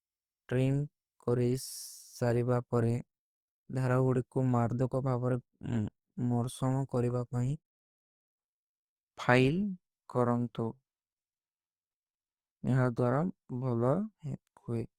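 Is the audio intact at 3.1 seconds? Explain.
No. At 3.1 seconds, as across the whole clip, the speech carries plainly audible Opus compression damage, likely from a low-rate music-mode encode near 24 kbps. Starved bands are filled with folded or noise content, so the sound turns grainy and rough rather than swirling with MP3-style holes, while the band still reaches about 19.5 kHz.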